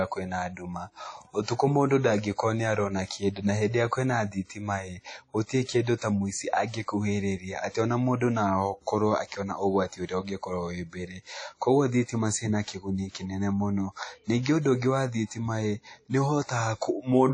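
A speech recording that has most likely passed through WMA compression at a low bitrate, around 32 kbps by the sound of it. The encoder discards everything above about 10.1 kHz and spreads quantisation noise through long transform blocks, leaving the whole clip dull, ringing and washy, with plainly audible hiss that swells and fades with the voice. At 9.27 to 9.32 s, pre-echo appears: a sharp onset landed late in a transform block, so noise sized for the loud attack smeared back across the preceding quiet, producing a short hiss about 48 ms before the sound and a softened, blurred attack.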